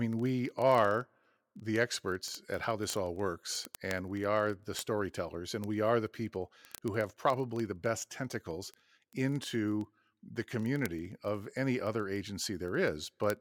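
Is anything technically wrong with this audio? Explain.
Yes. Word clock ticks run from 0.13 s to 13.4 s: a receiver on its own unlocked clock, several hundred ppm off, slips one sample roughly every 30 ms, giving a steady train of several hundred sharp, uneven clicks under the speech.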